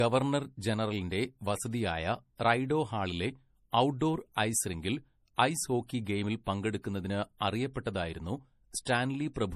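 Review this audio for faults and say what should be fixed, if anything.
Throughout, the speech carries the artefacts of an earlier low-bitrate encoding, with nothing above 14.9 kHz. This is likely low-bitrate audio saved at a high bitrate, consistent with an MP3 near 40 kbit/s re-encoded at 320 kbit/s. To prevent it, encode once, directly from a lossless original.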